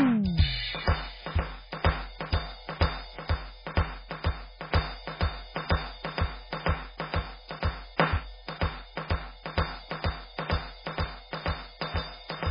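Music, with the whole clip showing heavy MP3 compression damage: nothing survives above 5 kHz, and weak spectral detail flickers in and out, giving a watery, swirling texture with smeared attacks. That flicker is what separates it from a plain low-pass filter. The likely cause is a very low bitrate, around 16 kbps.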